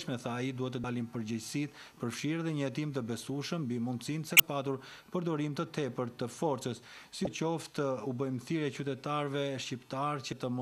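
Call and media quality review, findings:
Damaged data in a compressed stream, decoder input. Corrupted bytes in four short stretches make the decoder misread frames, lose sync and hunt for the next valid frame header. Heard as brief chirp or blip bursts, roughly 30 to 40 ms each, at 0.81–0.84 s, 4.37–4.40 s, 7.24–7.27 s and 10.30–10.33 s. Evenly spaced, about every 3 s, pointing to a recurring fault in the transport or storage path, not in the source.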